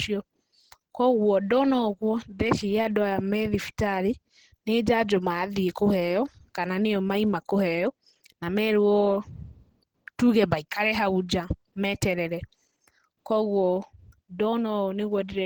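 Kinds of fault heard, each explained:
Opus compression: Throughout the speech there is plainly audible codec damage, a hoarse, muffled grain in the lower and middle range, while the upper band above it is filled rather than left with holes, so the spectrum still reaches about 20 kHz. That blend points to the likely cause being Opus in its hybrid mode, coding the low band as speech and the top band by energy alone, which fits a rate around 16 kbps.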